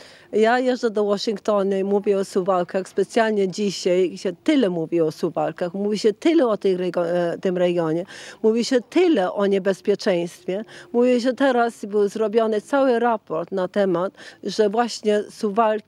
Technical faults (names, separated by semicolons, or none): none